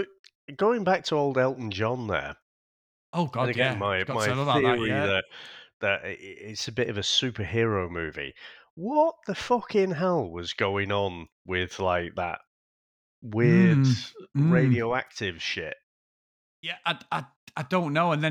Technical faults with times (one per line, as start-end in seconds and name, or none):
none